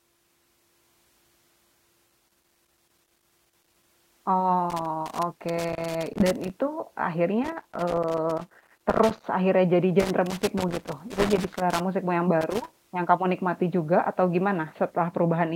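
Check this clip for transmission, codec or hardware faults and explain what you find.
The speech is interrupted by loose connector crackle in five bursts. They run from 2.09 to 3.88 s, 4.70 to 6.50 s, 7.44 to 9.24 s, 10.0 to 11.8 s, and briefly from 12.41 to 12.73 s. The first four each last about 1.8 s. A worn or dirty contact keeps making and breaking as it shifts. That chops the signal on and off, and any DC on the line turns each break into a pop. The result is an irregular scratchy crackle over the speech.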